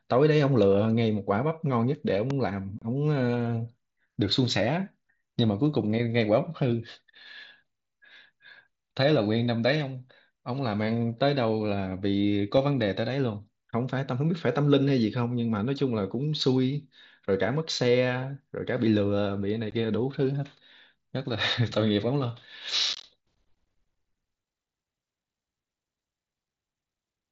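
Loud pops at 2.30 s and between 12.57 and 12.84 s interrupt this speech recording. The first is a single pop roughly 10 dB above the speech. The second is a pair about 5 dB above it. Each is likely a sudden voltage step from a plug, switch or static, shaped by the downstream circuitry into a sharp thump while the speech continues underneath. Unconcealed Bluetooth headset packet loss cuts abrupt holes in the speech at 2.79 to 2.82 s (30 ms), at 19.71 s (15 ms), and across 22.93 to 23.04 s. In that last stretch, about 67.5 ms is missing in scattered bursts, the longest 22.5 ms, giving a brief chopped, crackly roughness. Lost headset packets were replaced with silence or an idle pattern rather than patched over, so the edges are abrupt. Throughout, the wideband mSBC headset link at 61 kbps limits the speech to 8 kHz and adds a light grain on louder syllables.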